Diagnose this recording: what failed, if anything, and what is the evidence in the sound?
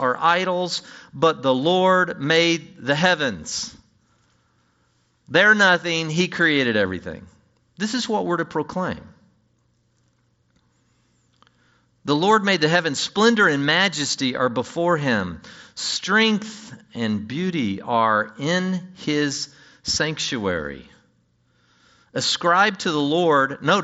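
Nothing failed in this recording.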